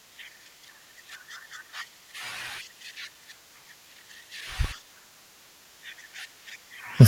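A periodic USB or driver dropout affects this speech recording: between 3.15 and 6.64 s, something blocks the audio path every 0.5 s, and each time a couple of milliseconds of signal are replaced with silence, giving about seven evenly spaced ticks that are heard only while the voice is present.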